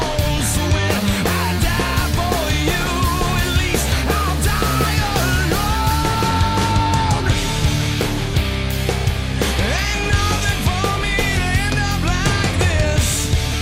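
No technical faults can be heard anywhere in the audio, so there is nothing to describe in time order.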